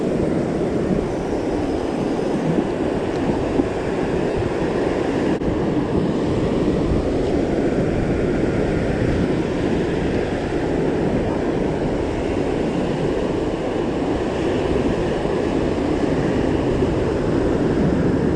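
Lost LE Audio frames at 4.30, 11.26–11.37 and 15.48 s. The decoder fills each gap with a randomised copy of the last spectrum, giving brief noisy smears.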